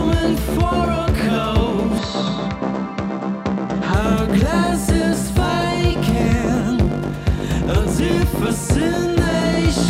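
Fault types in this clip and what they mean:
input switched to a poorer device: From 1.98 to 3.94 s the sound abruptly turns duller and slightly quieter, losing everything above 7.9 kHz and gaining a faint new noise floor, with no gap at either switch. Likely the input briefly moved to a narrower-band microphone.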